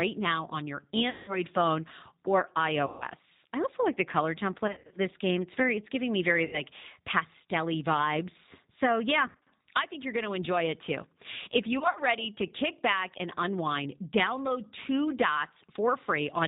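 You're hearing a speech clip squeezed through the G.729 codec at 8 kbit/s: nothing above 4 kHz survives, and the rebuilt voice has a plainly rough, slightly synthetic edge. There's also VoIP packet loss concealed by the speech codec at 1.10–1.39 s (between "now on your" and "phone or"), 2.86–3.05 s (before "I also like the"), 4.67–4.98 s (after "also like the color"), 6.45–6.62 s, 9.27–9.47 s and 11.79–12.01 s. In each gap the decoder stretches the last sound into a buzzy tone or coloured noise that fades, and the voice stays weak for a moment afterwards. The gaps fit roughly 80 to 190 ms of lost audio, and the 4.67, 9.27 and 11.79 s ones sound like scattered short dropouts rather than a single hole.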